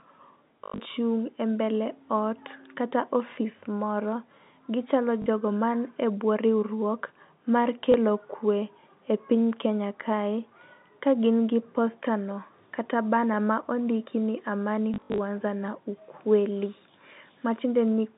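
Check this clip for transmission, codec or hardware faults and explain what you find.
There is one fault: packet loss with the last packet repeated, heard four times. It occurs at 0.64 to 0.8 s, at 5.22 to 5.26 s just before "jogo mani e bwo", at 7.92 to 7.94 s between "e bwo riwruok mar" and "kwe e piny", and at 14.94 to 15.18 s between "ma ondiki ni amani" and "na ukweli". Packets went missing. The receiver replayed the last good one until new packets arrived. The repeats don't line up with the pitch cycle. Longer runs, up to 100 ms near 0.64 s, buzz at about 50 Hz, which fits 20 ms packets. It sounds like a short robotic stutter. The G.711 telephone band, 150 Hz to 3.7 kHz, comes through as a plain phone line.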